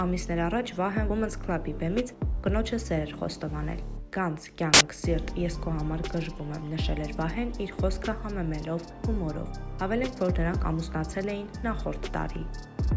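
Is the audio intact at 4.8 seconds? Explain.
No. From 4.74 to 4.81 s, file tags are played as audio: an embedded cover picture's compressed bytes are read as samples, giving a burst of very loud white noise with hard edges. Unlike clipping or a codec glitch, it's pure static unrelated to the surrounding sound.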